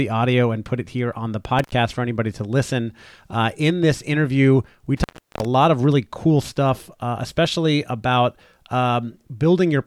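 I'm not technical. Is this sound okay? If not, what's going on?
No. It's an intermittent contact, a loose cable or plug briefly breaking the connection. The speech cuts out at 1.59 to 1.72 s, after "it here on the", and again for longer at 4.97 to 5.45 s, after "in this interview we". Unlike a clean digital dropout, each cut starts and ends with a crackle, with faint hiss in between.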